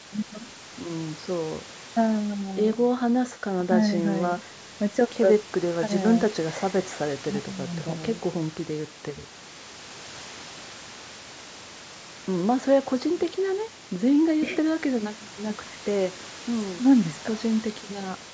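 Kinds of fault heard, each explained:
No technical faults are audible in the speech: the room noise sits about 15 dB below it, and the call microphone processing leaves nothing above 8 kHz, as such a path normally does.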